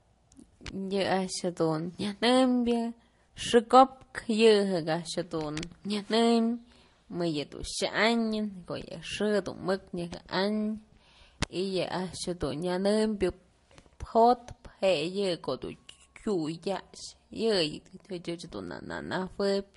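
Transcoding between lossy codecs affects this speech clip throughout. Nothing survives above 11.2 kHz, and two different kinds of coding artefact are heard together. This points to a roughly 48 kbit/s MP3, likely re-encoded to Vorbis near 41 kbit/s.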